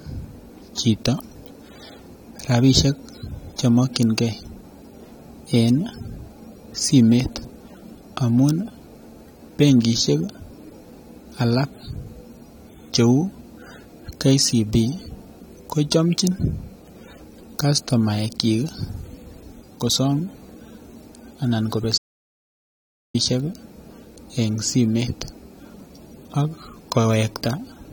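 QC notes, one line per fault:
21.98–23.14 s: audio dropout to silence. Speech cuts off mid-flow and 1.16 s falls to silence before resuming abruptly, likely because the input was lost while writing continued. Unlike a natural pause or a noise gate, there is no fade and no room tone.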